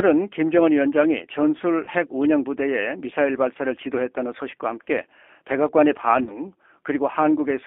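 Throughout, the speech passes through a G.729 codec, confined to roughly 300 Hz to 3.4 kHz. The roughness fits an 8 kbit/s coder that rebuilds each frame from a vocal tract filter and a few pulses, giving a plainly audible synthetic, grainy edge rather than the smeared, watery texture of a transform codec.

At 1.85 to 1.90 s, VoIP packet loss concealed by the speech codec replaces about 20 ms of sound with a stretched continuation, a buzzy tone or coloured noise that dies away, and the voice stays weak briefly afterwards. Unlike a plain dropout, there is no silence or click.

At 6.23 to 6.42 s, a longer concealment covers about 40 ms of loss, consistent with two consecutive packets. The extrapolated sound fades further, and the voice stays weak or distorted for a while after packets return because each decoded frame builds on the damaged one before it.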